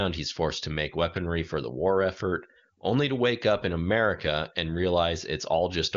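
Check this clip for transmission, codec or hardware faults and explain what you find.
Nothing stood out on listening to this speech clip.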